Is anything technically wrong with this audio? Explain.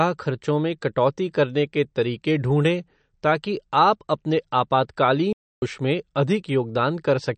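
Yes, there are two faults.

Throughout the speech, the sound is watery and swirly, with metallic chirps on s sounds. Nothing is present above 8.6 kHz. This is likely MP3 compression at a low bitrate, around 40 kbps. Short of bits, the encoder cut the treble and dropped weak frequency lines frame by frame.

From 5.33 to 5.62 s, the audio goes silent for about 0.29 s, then carries on. This is a playback stall, likely because the player ran out of data or was blocked. The sound breaks off mid-flow until output recovers.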